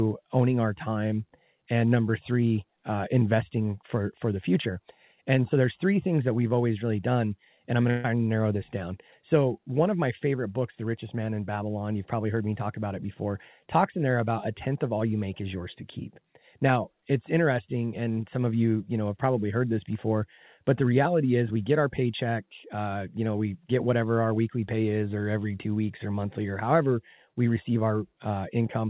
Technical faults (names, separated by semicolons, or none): burst of packet loss